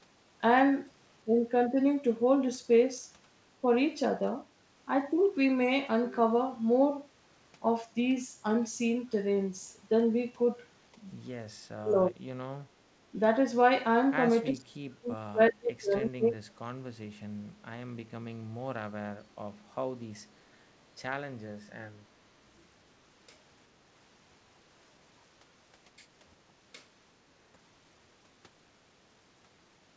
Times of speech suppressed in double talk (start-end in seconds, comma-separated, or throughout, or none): 11.75-12.23, 14.50-16.80